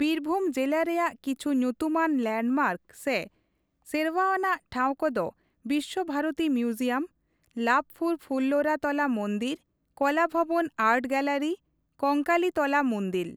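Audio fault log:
No technical faults are audible anywhere in the speech signal, with no disturbances introduced along its path.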